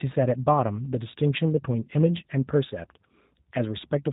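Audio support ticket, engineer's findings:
Speech path encoded with the G.729 codec (A variant) throughout; the heavy frame-based coding fits an 8 kbit/s VoIP link. Band cut off at 3.8 kHz, no sibilance above. Rebuilt from filter, pitch and pulses, so speech is plainly rough and synthetic.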